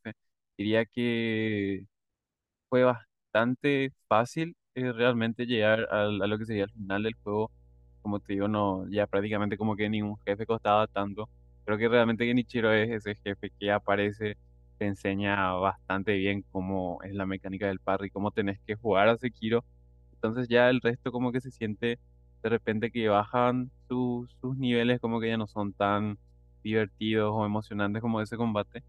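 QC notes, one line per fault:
5.78–28.88 s, mains hum: a steady 60 Hz tone enters at 5.78 s and runs unbroken to the end of the clip, sitting roughly 30 dB below the speech. Power-line current is getting into the signal path, through a ground loop between connected equipment or through magnetic coupling from a nearby transformer. Because that current alternates at the supply frequency, it adds a constant low drone that stays put beneath and between the speech.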